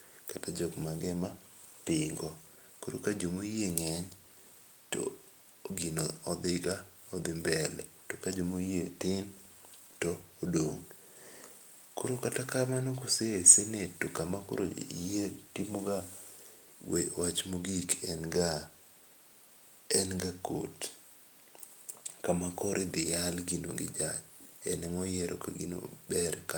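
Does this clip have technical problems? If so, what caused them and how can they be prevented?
No, the speech signal is technically intact, with no faults to trace to a cause or to prevent.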